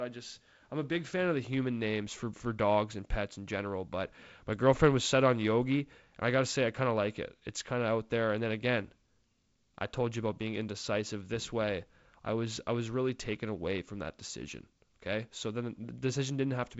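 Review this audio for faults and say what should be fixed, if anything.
Nothing needs fixing: the speech carries G.722 wideband telephone coding, with the light upper-band hiss and slightly noisier lower band that point to its 48 kbit/s mode, and nothing above 7.7 kHz.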